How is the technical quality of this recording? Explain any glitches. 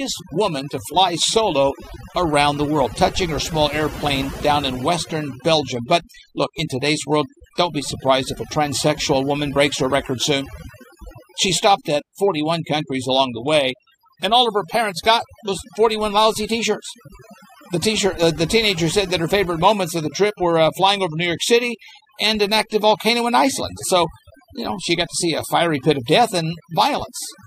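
The main problem is overdone noise removal, running the whole way through. The noise reduction was pushed so hard that bands near the noise floor get gated out along with quiet parts of the speech. That leaves a near-silent background with twinkly specks.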